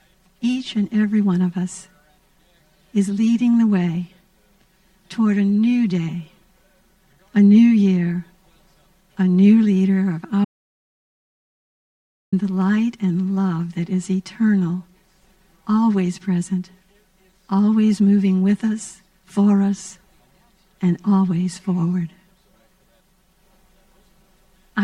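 At 10.45 s the sound stops dead in mid-flow and stays in complete silence until 12.32 s, when it resumes just as abruptly. The gap holds no room tone or background hiss at all, only silence, and roughly 1.88 s of material is simply missing. This is an audio dropout to silence, likely caused by the input being lost for a moment, through a disconnected device, a failed link or a stray mute, while recording carried on writing empty samples.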